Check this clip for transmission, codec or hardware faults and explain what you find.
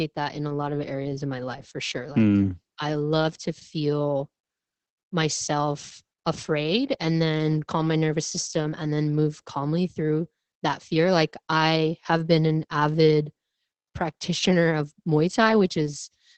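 One fault runs through the whole clip: Opus voice compression. The encoder runs its SILK linear-prediction coder on a wideband signal, cutting everything above 8 kHz. The heavy damage fits a bitrate near 10 kbps, with a coarsely coded excitation that leaves the speech muffled, hoarse and slightly robotic.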